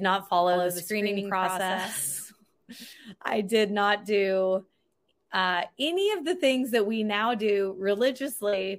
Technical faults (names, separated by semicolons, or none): doubled audio track